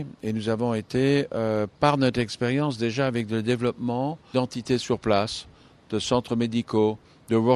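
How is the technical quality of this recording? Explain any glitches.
No technical faults can be heard anywhere in the recording, and the signal stays intact and continuous throughout.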